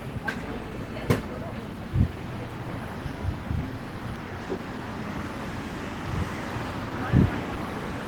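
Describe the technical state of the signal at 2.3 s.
At 2.3 s the audio is intact, with no dropout, distortion, noise burst or other fault in the sound at that moment.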